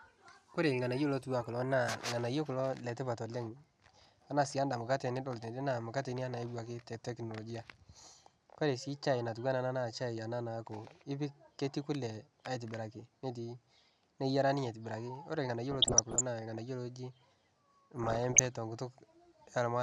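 Speech carrying two short bursts of burbling: from 15.71 to 16.22 s and again from 17.97 to 18.56 s. This is DAB burbling. Weak reception left a bit error rate of around 1 percent in the first burst and 0.7 percent in the second, and errors that slipped past error correction corrupted MP2 samples and scale factors. Each burst points to a couple of dozen damaged frames.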